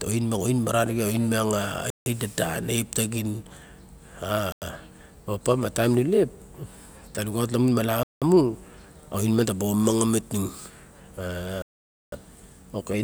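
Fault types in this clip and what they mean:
Bluetooth stall: The speech drops abruptly to dead silence four times, at 1.90, 4.52, 8.03 and 11.62 s, for about 160, 96, 186 and 501 ms, then resumes as if paused rather than cut. The likely cause is radio interference delaying the wireless packets, so the headphones' small playback buffer emptied and output halted until the retransmitted audio arrived. The last gap, half a second long, is the longest.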